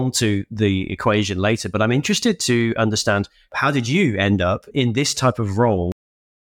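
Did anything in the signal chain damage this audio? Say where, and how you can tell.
Yes: a cut-off end at 5.92 s, right after "up in this type", points to final buffers never written in storage. The speech stops mid-sound into digital silence with no decay.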